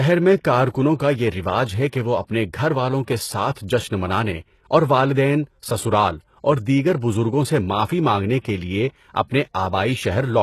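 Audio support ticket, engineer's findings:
Speech, whole clip, start to finish. Treble present but synthetic: s sounds gritty, metallic, lispy; nothing above 12.3 kHz. Likely HE-AAC compression, consistent with a very low bitrate near 16 kbps. Upper band regenerated from copied lower bands under a coarse envelope, so harmonics misalign at the crossover. Differs from a plain low-pass or band-limited codec: top end bright, not dull, yet wrong in texture.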